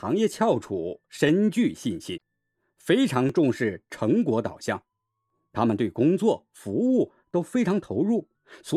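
At 1.29 s the speech has a brief stutter. It comes from overlapping chunks: the audio was handled in 2.0 s blocks, and each new block begins about 6.5 ms before the previous one finished, so that sliver plays twice at the seam. The same doubled fragment recurs at 3.29, 5.30 and 7.31 s, about 2 s apart. Each one sounds like a small click or hiccup, and the even spacing points to fixed block boundaries rather than anything in the speech.

Between 2.14 and 2.18 s there is a short glitch lasting roughly 46 ms, caused by damaged data in a compressed stream. Bytes in the encoded stream were corrupted at this point, so the decoder could not read those frames correctly and lost sync until it found a valid frame header again. What it produced while out of step comes through as a brief disruption in the speech.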